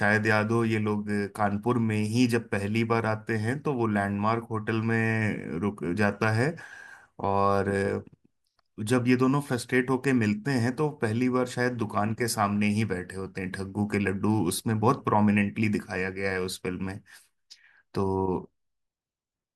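No technical faults are audible.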